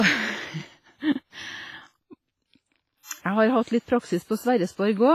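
Throughout the speech, heavy transform-codec damage is audible, likely WMA compression at a bitrate that fits around 24 kbps. Long coding blocks smear quantisation noise across tens of milliseconds, giving a ringing, washy texture and a hiss that breathes with the signal. Nothing remains above 15.4 kHz.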